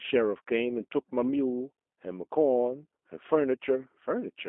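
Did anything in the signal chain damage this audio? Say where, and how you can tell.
Yes. The codec stage did, throughout the speech: G.729 coding, consistent with an 8 kbit/s G.729A link, leaves a band of roughly 250 Hz to 3.5 kHz. The speech is rebuilt from a filter, pitch predictor and sparse pulses, so it sounds plainly rough and synthetic.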